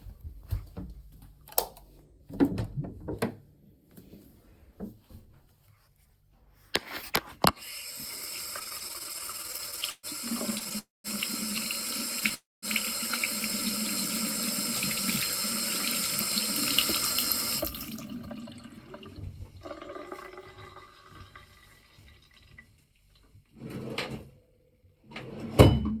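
From 8.59 to 10.74 s the sound stalls 26 times in repeated stalls (stutter). Late packets kept draining the jitter buffer, and the receiver stretched the last sound to fill about 393 ms in all, up to 130 ms at once. On a spectrogram this shows as smeared, repeated slices, and the audio drags.

A call audio freeze follows at 10.79–11.07 s, likely from packets held up in transit. The held sound fades into about 180 ms of silence, a flat stretch in the waveform, and the audio resumes 256 ms late with nothing lost. The same fault recurs at 12.34–12.65 s: a 282 ms hold, including about 210 ms of silence.

From 21.63 to 25.98 s a jitter buffer speed-up plays the sound at about 107% speed with unchanged pitch. The receiver trimmed short pitch-period pieces repeatedly, roughly a third of a second in total, so events bunch closer together on the time axis and the audio feels hurried.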